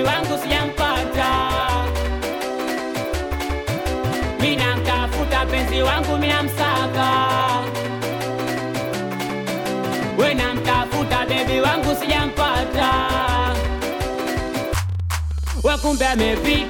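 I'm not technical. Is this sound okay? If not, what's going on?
No. From 13.50 s to 16.66 s there is a train of clicks: around forty short, near-identical ticks at roughly 13 per second, spaced unevenly rather than like a steady beat. They are about as loud as the sound itself, so they stand out clearly and continue through quieter moments too. This pattern is likely caused by something outside the recording injecting repeated pulses, such as electrical interference from nearby equipment or a faulty connection or power supply.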